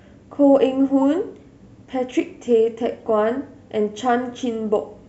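Speech clip with one corrupt frame decoded at 3.0 s. A single damaged frame was played anyway, giving a faint, brief artifact from energy landing at the wrong frequencies.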